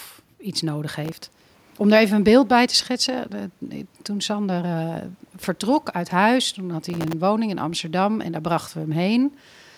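From 1.05 to 1.78 s, and again from 6.90 to 7.14 s, processor overload crackle tears through the speech: dozens of buffers, each only a millisecond or two long, miss their deadlines and replay stale audio with hard edges. The result is a gritty burst rather than a single clean dropout.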